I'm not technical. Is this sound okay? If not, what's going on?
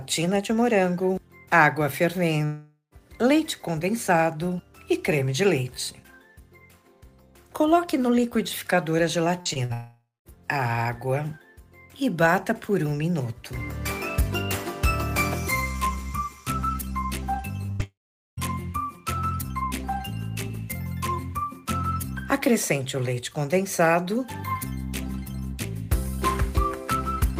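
No, it has gaps. Three times the sound drops out for about half a second: 2.45 to 2.93 s, 9.73 to 10.36 s, and 17.83 to 18.39 s. It fades into a buzz or hiss, goes quiet, then resumes with that part lost. This is a long network dropout, likely from the connection cutting out.

There are also tiny glitches at 9.41, 9.53, 9.65 and 17.66 s. These are short concealed packet loss: a sliver of sound went missing and was patched over, leaving a brief smear.

At 17.72 to 17.81 s there is a burst of packet loss. About a tenth of a second is missing, and you hear a held, fading sound instead.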